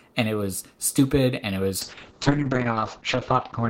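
From 1.82 s, just after "was stupid and it", a call bitrate drop starves the encoder until the end. The speech turns rough and watery, with everything above 8 kHz cut away. This fits a fall from about 40 to 7 kbps, bottoming out for 1.13 s.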